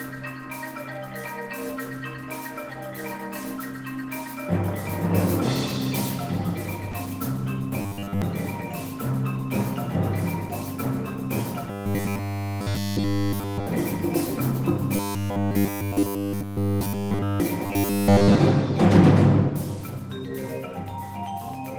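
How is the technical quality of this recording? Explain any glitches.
The recording has two kinds of transmission glitch: one brief dropout and four stretches of buzzy, repeated audio.

From 6.91 to 6.95 s there is short concealed packet loss. About 20 ms of audio never arrived, and the receiver filled the gap by extending the preceding sound before blending back into the real signal. It is heard as a tiny smear or wobble. On a spectrogram it shows as a thin vertical slice where the texture goes briefly uniform. In the waveform the shape repeats smoothly instead of varying.

Robotic sound from repeated short buffers occurs at 7.82–8.22 s, 11.71–13.67 s, 14.96–17.40 s and 17.66–18.38 s. The sound turns into a rigid metallic buzz pitched at 100 Hz. The likely cause is that audio arrived too seldom, so the software kept replaying the last 10 ms while real audio was skipped. This happens for roughly 70 percent of the first and last stretches and throughout the middle two. 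A spectrogram shows evenly spaced horizontal harmonics at multiples of 100 Hz. The waveform shows an identical 10 ms cycle repeating.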